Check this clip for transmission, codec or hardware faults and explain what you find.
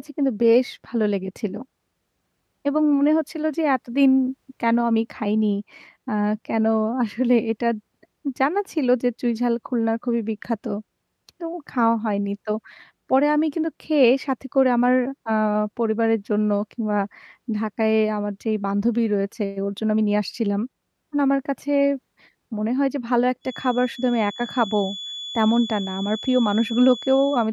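One fault is present: a feedback whistle in the final stretch of the speech. From 23.40 s to the end of the clip at 27.53 s, a thin, steady tone at 3.4 kHz sits behind the speech, some 15 dB below it, swelling and fading slowly in level. The likely cause is a loudspeaker-to-microphone loop held just at the edge of feedback, so that single frequency keeps ringing without building into a runaway howl.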